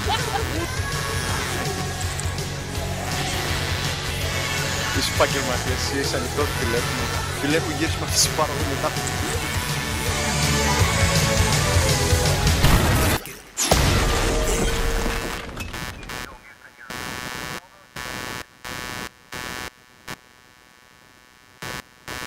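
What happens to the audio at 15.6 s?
At 15.6 s you're hearing computer activity noise, and it runs through the whole clip, not just that moment. Processor, graphics or mouse load is shifting the audio circuit's shared ground, so a buzzing, chirping or scratching pattern pulsing at roughly 150 Hz sits around 10 dB under the sound, rising and falling with the machine's activity.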